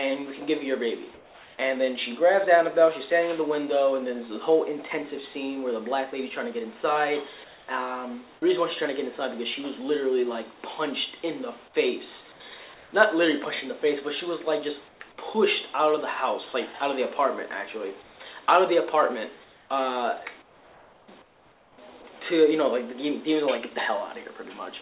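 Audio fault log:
1.14–1.58 s, 7.44–7.68 s, 12.32–12.92 s, 14.88–15.0 s, 18.02–18.48 s, 19.44–19.7 s and 20.42–21.78 s: comfort noise in place of the background. The sender likely stopped transmitting in quiet gaps, and the receiver filled each pause with synthetic noise shaped to resemble the background. The real background, about 27 to 30 dB below the loudest passages, turns into a smoother hiss. Where the level can be measured it drops by about 1 to 4 dB. The sound around it has nothing above 4 kHz, as expected for a G.711 call path.
18.46–18.48 s: sound dropped by the voice detector. The detector likely judged the tail of the sound to be background and cut transmission about 10 ms early. That lost piece is replaced by the same synthetic noise that fills the pause ending at 18.48 s, so the sound is clipped short right at the point where it gives way to steady noise.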